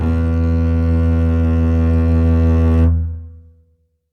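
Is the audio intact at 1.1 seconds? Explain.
Yes, the music is intact at 1.1 seconds, with no dropout, click, distortion or other fault audible at that moment.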